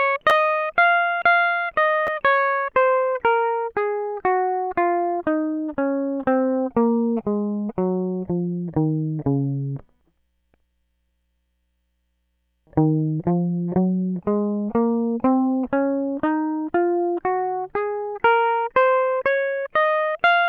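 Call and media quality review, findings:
Brief clicks in the music at 0.30 s and 2.07 s. Repeated buffer: about 11 ms of audio played twice with hard joins, which fits a 512-sample buffer. Roughly 10 ms lost each time.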